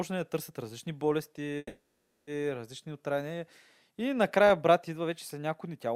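At 1.57 to 2.30 s, a call audio freeze: the sound stretches into a fading buzz, then about half a second of silence, likely from delayed packets emptying the jitter buffer.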